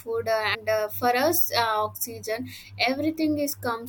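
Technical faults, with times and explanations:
0.53–0.55 s, damaged data in a compressed stream: for about 20 ms, the speech gets a short glitch where part of the compressed stream has gone bad. Some bytes were lost, zeroed or overwritten, so the decoder can't read those frames properly. It either turns the garbage into a brief burst of nonsense or drops the frames, loses sync, and hunts for the next valid frame header before normal playback resumes.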